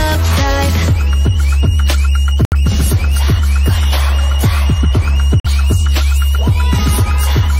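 The audio drops abruptly to silence at 2.45–2.54 s and 5.40–5.47 s: corrupt frames muted, where damaged compressed frames were rejected by the decoder and replaced with silence while timing was kept.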